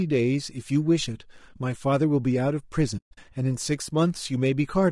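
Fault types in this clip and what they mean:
Low-delay AAC compression: the speech sounds rough and grainy throughout, likely from short-frame AAC-ELD coding at a low rate that fits around 32 kbps.
AAC frame loss with muting: between 2.97 and 3.18 s, lost frames are zeroed, leaving soft-faded holes totaling 180 ms, the longest roughly 150 ms.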